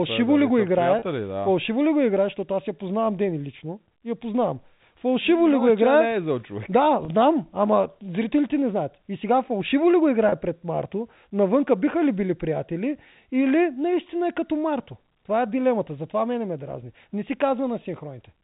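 Packet loss with pitch repetition at 0.99–1.02 s, 7.05–7.08 s and 10.29–10.32 s: each 30 ms gap, consistent with one lost packet, is bridged by repeating the last pitch period, heard as a briefly held, buzzy note, over G.711 telephone-band audio.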